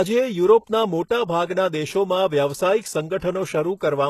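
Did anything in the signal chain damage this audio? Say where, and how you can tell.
Yes, at the codec stage, throughout the speech. The s sounds are gritty and lispy, and the treble has a metallic sheen. A spectrogram shows a hard ceiling at 12.3 kHz, with upper bands that look copied from below. That points to likely HE-AAC compression at a low bitrate, around 16 kbps, rebuilding the treble.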